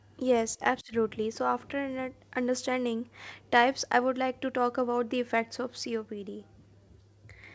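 No technical faults can be heard in the speech, which comes through a call path whose codec leaves nothing above 8 kHz.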